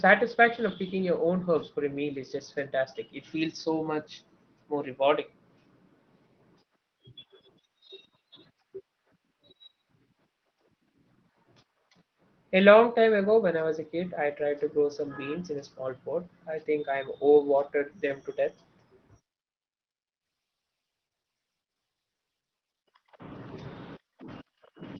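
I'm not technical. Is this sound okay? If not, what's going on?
Yes, this speech recording has no problems to report.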